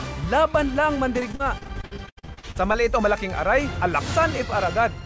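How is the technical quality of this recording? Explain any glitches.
The recording has one fault, heard through a call-type path whose content stops at 8 kHz, consistent with a wideband codec such as G.722.

From 1.20 to 2.76 s there is repeated packet loss with a robotic sound: many short gaps, up to 80 ms each, are patched by extending the preceding audio. About a third of that stretch is concealed, which makes the sound choppy and mechanical.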